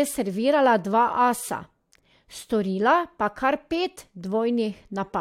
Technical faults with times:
none

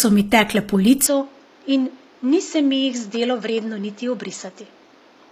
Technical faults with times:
0.00-5.31 HE-AAC compression
1.06-5.31 input switched to a poorer device

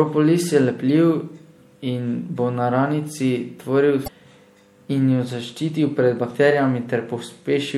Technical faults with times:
0.00-7.77 MP3 compression
0.88-0.90 damaged data in a compressed stream
4.04-4.08 damaged data in a compressed stream

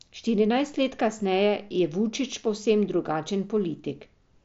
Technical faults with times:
none

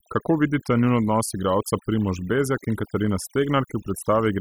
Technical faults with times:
0.00-4.41 overdone noise removal

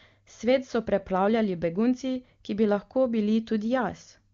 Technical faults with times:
none

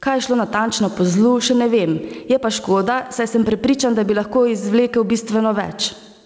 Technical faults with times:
0.00-6.26 gain pumping

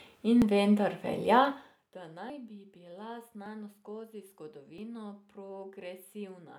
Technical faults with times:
0.42 dropped buffer (overrun)
2.30 dropped buffer (overrun)
3.46 dropped buffer (overrun)
4.78 dropped buffer (overrun)

